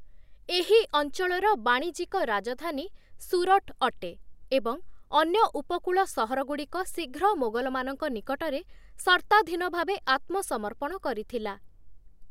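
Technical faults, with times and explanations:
Nothing wrong turns up here; the speech comes through without a single technical hiccup worth flagging.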